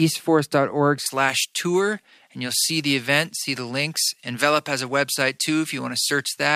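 From 1.06 s to the end, pre-emphasis is left on. A treble lift, consistent with the J.17 curve, was never undone, so 10 kHz sits about 11 dB above 1 kHz. The speech sounds thin, bright and sibilant. Unlike distortion, it adds no grit, only a steadily tilted balance.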